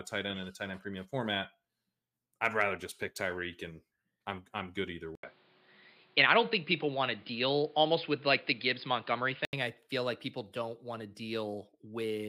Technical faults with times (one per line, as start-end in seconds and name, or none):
5.15-9.53 input switched to a poorer device